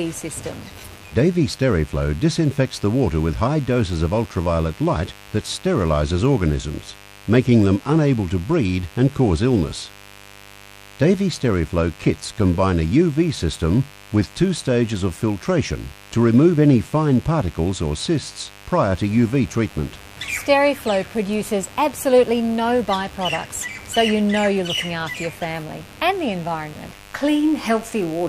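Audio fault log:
throughout: mains buzz, a steady raspy layer roughly 25 dB below the sound, from sharp spikes twice per 50 Hz cycle, which show as stacked horizontal lines every 50 Hz reaching several kHz.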